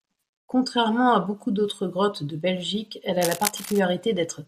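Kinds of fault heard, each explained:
Cable scratch noise: from 3.21 to 3.83 s a dense, uneven crackling rustle sits over the speech, roughly 10 dB below it, most likely from a worn cable, plug or control being moved so that its contact resistance fluctuates rapidly.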